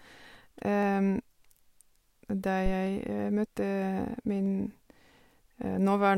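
Three single sharp clicks cut through the speech at 0.83 s, 2.87 s and 4.46 s, each too brief to erase any sound and showing as a thin vertical line across the spectrum. These are likely dropped samples: a fraction of a millisecond of the stream goes missing, so the waveform leaps from one value straight to a later one. That abrupt step is what produces each click.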